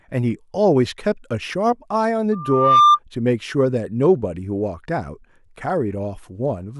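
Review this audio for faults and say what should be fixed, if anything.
A piercing 1.2 kHz tone swells up through the speech from 2.32 s to 2.99 s. It builds over about half a second to roughly 10 dB above the speech. This is loudspeaker feedback squeal: the microphone picks up its own loudspeaker, and at 1.2 kHz the loop gain exceeds one. Lower the system gain, keep the microphone out of the loudspeaker's coverage, or notch 1.2 kHz.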